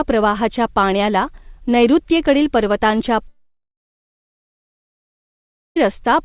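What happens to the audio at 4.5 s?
At 4.5 s the audio is silent, inside a long network dropout running from 3.28 to 5.79 s, just after "प्रवाहाच्या पाण्याला नैऋत्येकडील पर्वतांच्या". The likely cause is lost packets: a brief concealment fade gives way to roughly 2.25 s of silence, and nearly 2.5 s of audio never returns.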